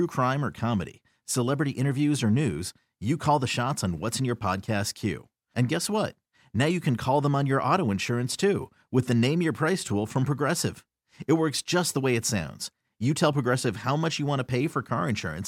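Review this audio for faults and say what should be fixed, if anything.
Nothing here needs fixing; no faults were found.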